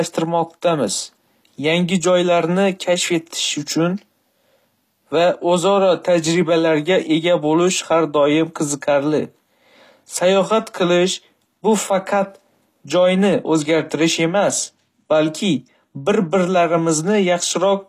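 From start to end, the speech carries plainly audible HE-AAC compression damage. S sounds turn gritty and lispy. The treble is rebuilt from copied lower bands, not the original. Nothing sounds above 14.9 kHz. This likely points to a low bitrate near 24 kbps.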